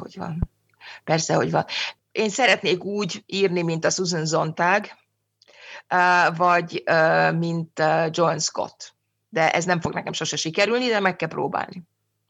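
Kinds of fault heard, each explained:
Loud pop: Two single, sharp pops sit on top of the speech, one at 0.43–0.45 s and another at 9.85–9.87 s, between "ez nem" and "nekem sose sikerülni de". Each lasts a few hundredths of a second and peaks at about 10 dB above the speech, which carries on uninterrupted beneath it. The likely cause is a brief voltage spike, such as a plug, switch, static discharge or driver glitch, added into the signal path.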